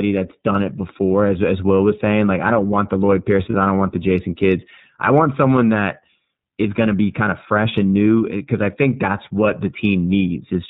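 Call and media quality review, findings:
iLBC codec, whole call: narrowband path, nothing above 4 kHz; plainly audible rough, synthetic speech, pointing to 30 ms frames at about 13.3 kbps.

Lost iLBC frames, 3.50–3.55 s: one 30 ms frame lost, decoder repeats last pitch cycle with noise; brief buzzy held vowel, clean again by "I don't want the".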